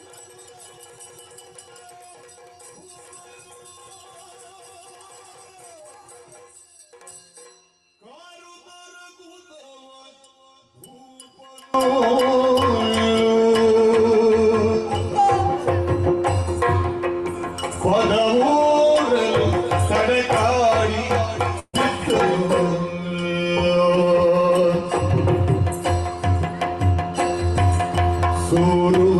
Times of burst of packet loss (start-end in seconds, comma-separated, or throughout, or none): 21.59-21.75